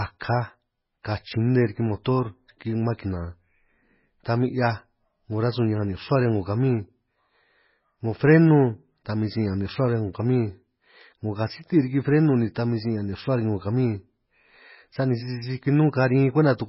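Throughout the speech, nothing is present above 5.5 kHz, and the remaining band sounds watery and swirly, with chirping on s sounds and smeared onsets. The likely cause is heavy MP3 compression, which fits a bitrate near 16 kbps: the encoder discards treble and switches weak frequency lines on and off between frames.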